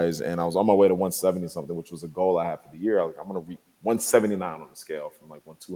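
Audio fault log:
Throughout: echo with no canceller, speech shadowed roughly 0.2 s later by a copy about 26 dB down, shown as a faint delayed repeat of each syllable on a spectrogram.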